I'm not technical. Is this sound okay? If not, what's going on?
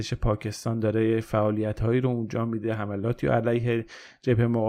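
Yes, the recording is technically sound, with nothing in the signal that points to a problem.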